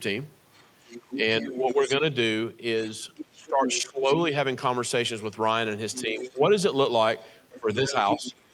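A speech clip with the other side's voice leaking through at 0.54–1.93 s, 2.88–4.14 s, 5.93–6.39 s and from 7.23 s to the end, sitting roughly 10 to 15 dB under the talker. It's likely an echo canceller letting loudspeaker playback slip back into the mic. Overlapping those stretches there's speech suppressed in double talk at 1.21–2.03 s, 3.34–4.34 s, 6.03–6.42 s and from 7.57 s to the end. The talker dips by anything from a few dB to around 20 dB, worst in the 3.34 s stretch, most likely because the canceller can't tell the two voices apart and ducks both.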